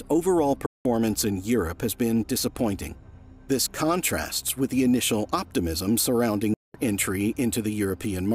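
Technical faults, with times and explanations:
0.66 to 0.85 s and 6.54 to 6.75 s, Bluetooth dropout: audio packets likely failed to reach the headphones in time and were discarded, so the output cuts to silence for about 190 ms and 200 ms, then resumes further along, as if the sound had kept playing.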